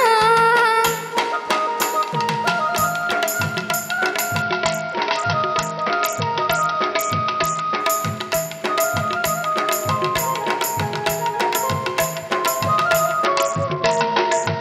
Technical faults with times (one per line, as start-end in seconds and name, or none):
4.42-7.80 Bluetooth SBC bit pool drop
13.25-14.60 Bluetooth SBC bit pool drop